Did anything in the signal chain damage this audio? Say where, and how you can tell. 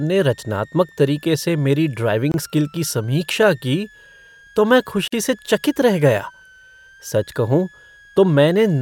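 Yes. Analogue power stage: a switching supply whistle sits under the speech throughout, drifting around 1.3 to 1.9 kHz, roughly 30 dB down. Unlike steady mains hum, it is high and wandering.

Codec stage: gaps at joins of encoded pieces, 24 ms at 2.32 s before "स्किल की समीक्षा की", and 47 ms at 5.08 to 5.12 s between "तो मैं" and "से चकित रह". Speech resumes exactly where it stopped, so this is untrimmed encoder padding rather than a lossy dropout.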